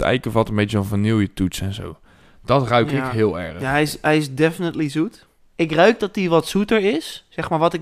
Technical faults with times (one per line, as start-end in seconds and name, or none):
2.90 repeated buffer